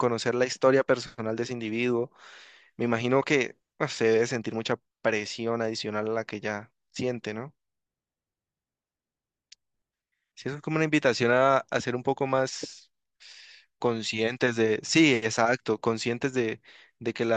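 No technical faults are audible.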